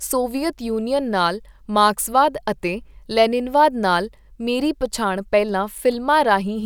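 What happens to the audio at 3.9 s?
Nothing goes wrong at 3.9 s: the speech runs through that moment intact, with no dropout, click, distortion or other fault.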